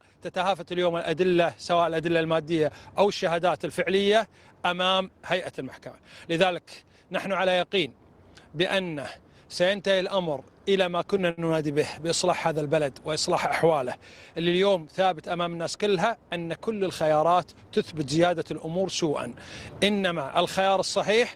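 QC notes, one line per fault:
11.30–11.41 s, short stall from a late packet: the jitter buffer ran dry, so the last sound was stretched for about 72 ms with a slight buzz or dip, then resumed exactly where it paused. Unlike packet loss, nothing is skipped; everything after simply runs 72 ms later.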